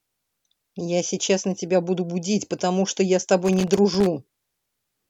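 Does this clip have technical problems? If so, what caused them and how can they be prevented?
Yes: loose connector crackle from 3.45 to 4.07 s, an irregular scratchy burst as a worn contact chops the speech, unlike evenly spaced digital clicks. Reseat or replace dirty, worn connectors and secure cables against movement.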